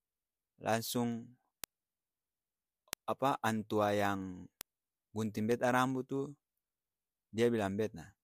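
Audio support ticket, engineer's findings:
Word clock ticks throughout the speech, 0.22 to 8.23 s, sharp and uneven, roughly every 0.15 s, around 70 total. Receiver free-running, not locked to sender's clock over the digital link; clocks drift about 200 ppm apart, dropping or repeating one sample each slip.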